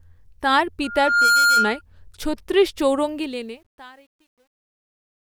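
Loudspeaker feedback squeal from 0.84 to 1.81 s: the microphone picks up its own loudspeaker, and a 1.4 kHz tone swells over roughly 0.4 s to about 5 dB above the speech.

Truncation distortion on a fade from 3.09 s to the end: as the speech fades out, a stage with too few bits, consistent with about 10 and no dither, turns the quiet tail into coarse steps. The result is gritty from 3.68 s onward.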